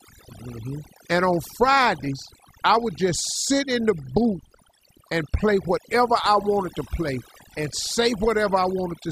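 Throughout, overdone noise removal drops the background and breaks it into twinkling specks; a spectrogram shows scattered isolated bins between dark gaps.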